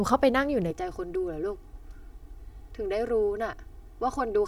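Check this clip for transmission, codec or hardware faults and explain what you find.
There is one fault, a channel delay causing comb filtering. It starts at 0.71 s and runs to the end of the clip. One channel arrives about 3 ms behind the other, and the two are then summed to mono. Energy common to both channels cancels at evenly spaced frequencies. The first notch sits near 200 Hz, with further notches stacked regularly above it. The speech turns hollow and phasey, with a fixed, filtered colouring.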